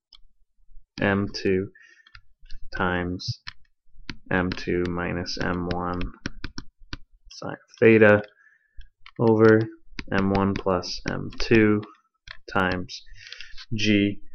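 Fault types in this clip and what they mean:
corrupt frame decoded: A brief, out-of-place chirp, squeak, blip or noise burst appears from 3.28 to 3.32 s, and a much quieter one, about 25 dB lower, at 11.82 s. Each fits a few compressed frames, roughly three and then two, that were damaged yet still decoded. The flipped bits gave the decoder wrong gains or codes, so energy landed at the wrong frequencies for about the length of those frames.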